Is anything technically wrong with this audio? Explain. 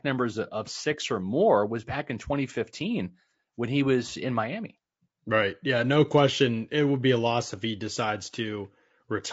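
Yes. Across the whole speech clip there is plainly audible low-delay AAC compression, likely from an AAC-ELD encoder running at about 32 kbps. Its very short frames cannot separate closely spaced pitch harmonics well, and at this bitrate the bits run thin, so the voice comes across rough and grainy. On a spectrogram the harmonic stripes look smeared, with noise filling the gaps between them, and the upper band looks patchy or artificially filled.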